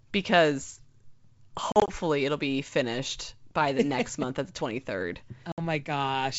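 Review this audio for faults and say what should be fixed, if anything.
Packet loss on an ADPCM call: hard silent gaps at 1.72–1.90 s (80 ms lost in bursts up to 40 ms, just before "it'll be finished by") and 5.52–5.60 s (60 ms). Unlike a plain dropout, the speech resumes with brief, slight distortion while the decoder's predictor resyncs. Fix it with packet loss concealment plus decoder state reset, or with jitter buffering and redundancy.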